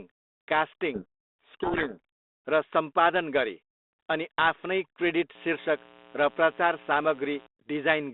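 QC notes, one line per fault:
0.94–1.99 s, codec payload misread: the G.726 code words are unpacked in the wrong bit order, so the speech over the 32 kbit/s line drowns in harsh distortion.
5.35–7.47 s, mains buzz: switching spikes twice per 60 Hz cycle leak in, laying a steady raspy buzz about 20 dB below the speech, with harmonics reaching kilohertz.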